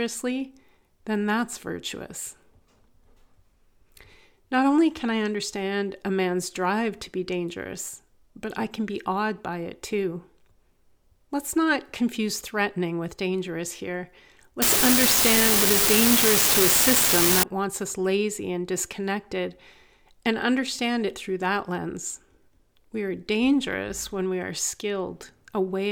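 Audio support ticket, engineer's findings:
Unreliable data bit, 14.62 to 17.43 s. Steady crackle/fizz over the speech, continuing through gaps. Probable component: marginal data line in converter or digital interface. One bit flips in a random share of samples; each flip adds a fixed-size spike, about -9 dBFS. Fault clears after 17.43 s.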